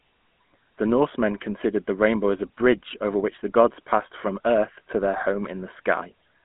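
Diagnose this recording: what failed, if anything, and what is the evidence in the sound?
The codec stage failed: the speech has been through a GSM full-rate codec, with plainly audible damage throughout. A buzzy, gravelly roughness sits on the voice, nothing is present above 3.8 kHz, and the band is confined to roughly 200 Hz to 3.4 kHz. This fits a 13 kbps stream where the vocal tract is modelled and driven by sparse, regularly spaced pulses.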